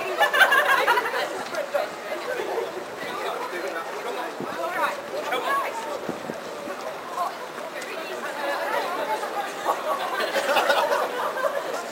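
Crude rate conversion runs through the whole clip. The sample rate was raised without a proper filter, simply by repeating the nearest existing sample. The pattern of repeats fits a change from 32 kHz to 44.1 kHz. That step-like error does not follow the sound's own pitches. It adds inharmonic tones roughly 20 dB below the signal. The result is a gritty fizz that rides on loud and bright moments.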